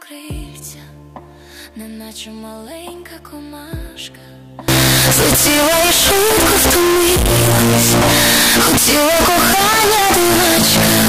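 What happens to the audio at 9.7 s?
From 4.68 s to the end: harsh distortion at full loudness, quiet parts included. The likely cause is signed and unsigned mixed up, so each zero crossing jumps across the whole range.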